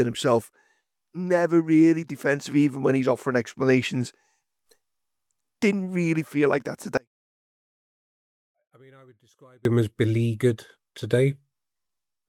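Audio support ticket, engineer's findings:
6.97–9.65 s: level collapses by about 32 dB, leaving a faint residue. Likely one channel inverted: reversed polarity on one side, so shared content cancels when summed to mono. Only inter-channel differences survive. Full level returns at 9.65 s.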